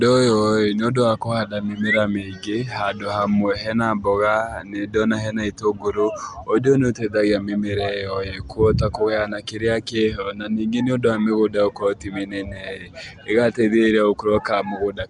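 Speech with Nellymoser compression audible throughout: a rough, hissy halo and a smeared, underwater quality, with nothing above 10.7 kHz. The likely cause is Flash's Nellymoser Asao codec filling starved bands with noise, at a rate that fits about 44 kbps.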